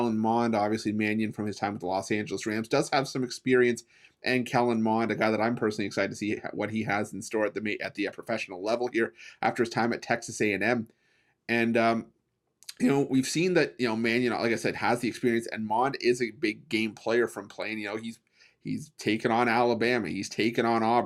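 No technical faults can be heard anywhere in this recording.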